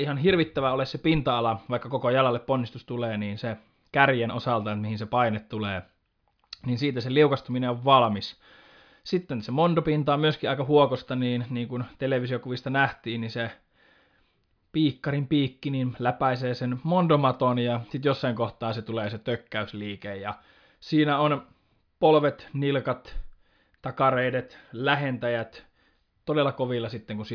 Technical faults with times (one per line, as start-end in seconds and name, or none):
none